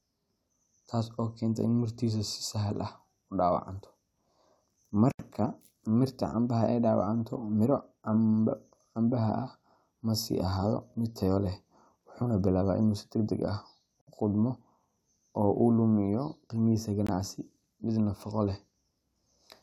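Speech that drops abruptly to silence three times and then resumes: about 76 ms at 5.12 to 5.19 s, 58 ms at 14.01 to 14.07 s, and a brief gap at 17.07 s. These are likely Bluetooth stalls, where held-up packets left the headphones' buffer empty until resent audio arrived.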